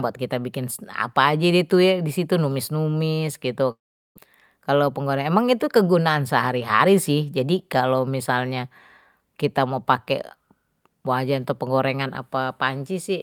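From 3.71 to 4.20 s the speech dissolves into a fading buzz, then silence, and returns with 400 ms lost. This is likely a long network dropout. From 4.75 to 5.09 s it sounds hurried, 9% fast at unchanged pitch: a jitter buffer speed-up cutting around 40 ms of pitch periods.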